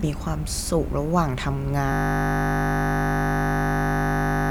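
At 1.92 s the speech locks into a system hang loop: the machine or driver froze while the audio hardware kept replaying one 20 ms slice of its buffer. That repeats at 50 Hz, so you get a steady buzz that runs right to the end.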